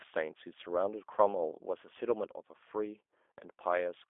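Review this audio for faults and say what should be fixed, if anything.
The whole clip carries G.729 codec damage. Everything above about 3.6 kHz is gone, the band sits roughly between 300 Hz and 3.5 kHz, and the voice has that rough, slightly synthetic buzz of a pulse-driven filter rebuild, which fits an 8 kbit/s G.729A path. To avoid it, record or route the call over a wideband codec such as G.722 or Opus rather than G.729.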